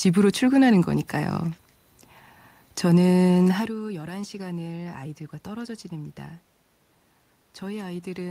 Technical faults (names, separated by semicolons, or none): none